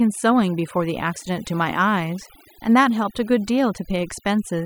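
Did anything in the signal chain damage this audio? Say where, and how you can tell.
Yes. Overdone noise removal at the call-processing stage runs throughout the speech. The background drops and breaks up into twinkling specks. Over-aggressive spectral subtraction is gating individual bands near the noise estimate, taking quiet speech components with them.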